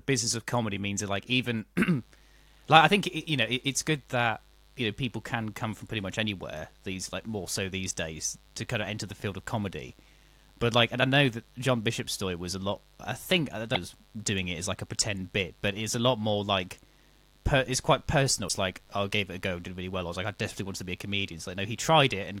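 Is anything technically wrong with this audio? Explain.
Yes, there are two kinds of fault in this speech recording.

Mains buzz starts at about 1.92 s, just after "means that like even", and continues to the end. It is locked to a 50 Hz supply. Something such as a dimmer, a rectifier or an unshielded run lets sharp switching spikes into the signal twice per mains cycle, so a dense ladder of 50 Hz harmonics reaches well into the kilohertz range. It sounds like a steady, raspy buzz beneath the speech, about 35 dB below it.

Damaged data in a compressed stream causes two brief glitches, at 13.75 s and 18.49 s, each shorter than 20 ms. At those points part of the encoded stream is corrupt. The decoder misreads or rejects the affected frames, loses its place and has to hunt for the next valid frame header before playback recovers. Each one is heard as a short chirp or blip cutting across the speech.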